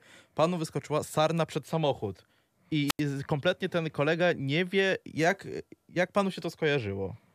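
At 2.87 s the speech breaks in a wireless microphone squelch dropout lasting until about 3.0 s, just before "I kompletnie ten kolega". The radio link from the FM transmitter weakens until the receiver's squelch closes and mutes its output, leaving a hole of near silence about 87 ms long. A short rise of hiss precedes the cut. On a spectrogram a broadband smear leads into a blank vertical band. The waveform collapses to a flat line before speech resumes.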